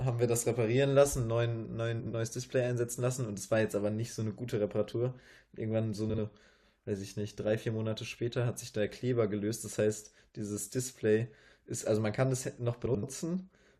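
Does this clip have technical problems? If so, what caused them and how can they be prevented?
Yes. Frames out of order: adjacent runs of frames were decoded in swapped sequence at 2.00–2.13 s, 6.09–6.19 s and 12.86–13.04 s, so each stretch plays its two halves (about 64, 43 and 85 ms each) reversed, giving a garbled flutter. Buffering by sequence number before decoding prevents it.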